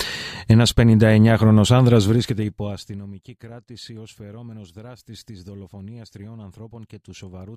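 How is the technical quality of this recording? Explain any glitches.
One glitch stands out: a stretch of zipper noise while the level drops. From 1.98 to 3.14 s, a fast ticking, zipping texture rides on the sound as it falls by roughly 25 dB. The cause is a gain change applied in coarse 2 dB steps, about fifteen a second, with no smoothing between them. Each jump puts a small discontinuity in the waveform, and the rapid run of those clicks is the zipper.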